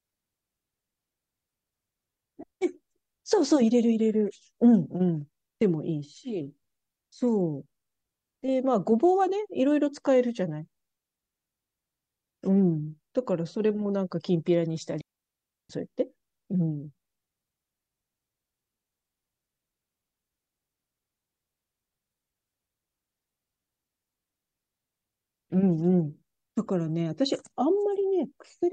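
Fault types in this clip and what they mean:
digital wireless dropout: The radio link lost too much data, so the receiver muted with a very quick fade instead of playing corrupted audio. This leaves clean holes of near silence, 0.25 s at 10.98 s and 0.69 s at 15.01 s, with no noise burst around either.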